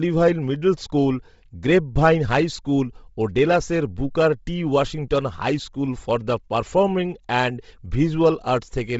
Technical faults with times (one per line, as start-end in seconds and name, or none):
0.00-9.00 Bluetooth LC3 compression